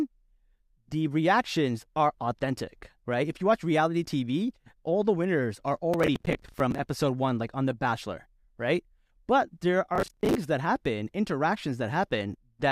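Processor overload crackle at 5.94–6.79 s, after "all the winners are", and 9.96–10.35 s, before "that happen": dozens of roughly 10 ms buffers miss deadlines, repeating stale audio as gritty tearing.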